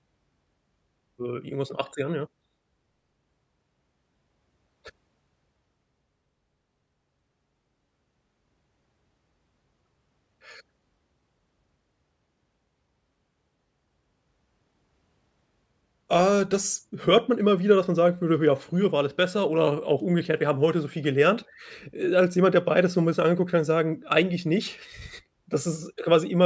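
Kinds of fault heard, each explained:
No kinds of fault are heard in this speech clip.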